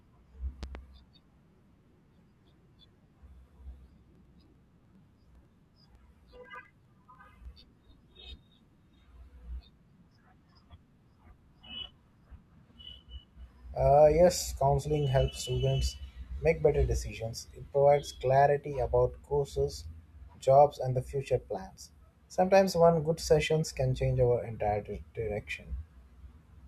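It's a speech recording with two separate problems. Right at the start, from 0.63 to 0.78 s, there's a loud pop, really a quick double pop that jumps a few dB above the speech while the talking carries on underneath. It's likely a voltage spike from a plug, switch or static discharge getting into the chain. Then from 4.15 to 7.45 s you get periodic USB or driver dropouts: a steady tick every 0.1 s, ten a second and around thirty in all. Each one is a tiny gap of a couple of milliseconds where the audio goes silent, which is what happens when a background task keeps stalling the bus or driver on a fixed schedule.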